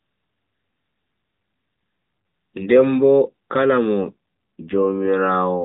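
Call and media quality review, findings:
AMR rate drop, 4.03 to 5.07 s. Speech turns rougher, buzzier, more synthetic. Bandwidth unchanged, no gap. Sound fits the AMR rate stepping down from about 12.2 to 5.9 kbps on a weak link. Fewer bits go to the voice and more to error protection. Quality recovers once the rate climbs back. Outside that window, the AMR narrowband codec is audible as a 4 kHz band limit with light coding roughness.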